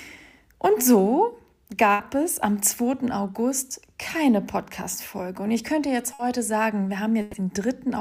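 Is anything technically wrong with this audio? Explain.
Yes. Burst of packet loss at 1.93–2.02 s, 6.13–6.22 s and 7.21–7.36 s: lost packets were concealed by extending and fading the last sound (60, 60 and 120 ms), then audio resumes with that span missing.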